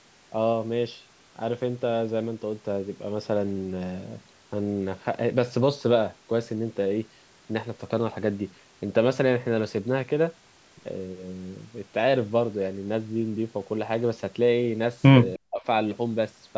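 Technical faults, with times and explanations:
15.36 to 15.64 s, speech suppressed in double talk: the speech suddenly drops by about 40 dB, most likely because the echo canceller mistook overlapping talk for echo and clamped everything.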